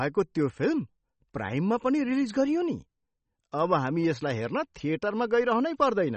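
Speech with plainly audible MP3 compression the whole way through: the treble stops dead at 8.3 kHz and there's a watery swirl, likely from a low bitrate around 32 kbps.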